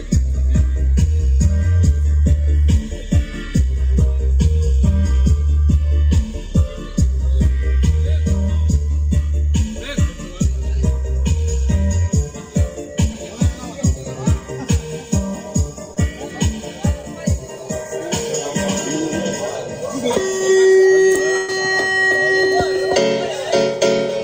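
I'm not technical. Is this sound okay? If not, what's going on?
No. At 6.09, 8.92, 13.13, 15.94, 17.02 and 20.39 s there are tiny smears or wobbles: short concealed packet loss, where tiny slices never arrived and the receiver papered over them.

From 21.37 to 21.49 s the sound stretches and fades, then jumps ahead. This is a burst of packet loss: about a tenth of a second went missing.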